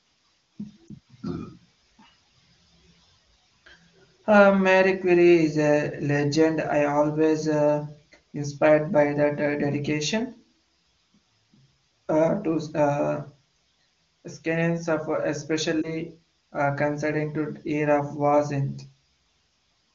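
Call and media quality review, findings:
Lost AMR speech frames: two quick dips/warbles in the speech, 0.88–0.90 s and 15.82–15.90 s, each sounding like one dropped 20 ms frame. Radio link errors failed frame checksums; the AMR-WB decoder concealed them by reusing the last good pitch and vocal tract settings at reduced gain. Codec quality around them is clean, consistent with a top wideband rate.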